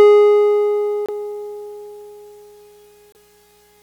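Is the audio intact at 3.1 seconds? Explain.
No. From 3.12 to 3.17 s the music jumps ahead and then breaks into a brief garbled disruption. This is likely a broken MP3 bit reservoir: frames were lost, and the next frame reached back for data it had stored in earlier frames but found unrelated bytes instead. The 44 ms span fits one or two frames of about 26 ms. On a spectrogram, the music is interrupted by a short patch. The waveform shows an abrupt discontinuity.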